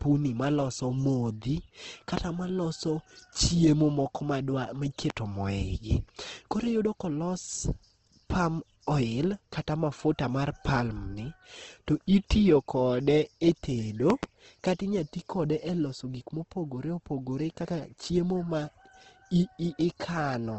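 Throughout the speech, Opus compression is plainly audible. The codec is likely running in its CELT music mode at a rate that fits about 16 kbps. Under bit starvation, bands are filled by folding or noise, so the voice sounds grainy and rough. A spectrogram shows a hard ceiling near 8.2 kHz with nothing above it.

A loud pop lands at 2.17–2.20 s, after "maloso modhi" and before "maloso chiemo moko". Another comes at 5.10–5.13 s. A double pop spans 14.10–14.26 s, just before "kata inyalo ti kode". Each is likely a voltage step or pulse from a plug, switch or static discharge, added on top of the speech. The first two peak roughly 15 dB above the signal and the double one roughly 20 dB above it. On a waveform each shows as a tall, narrow spike, and on a spectrogram as a thin vertical stripe up to that 8.2 kHz ceiling.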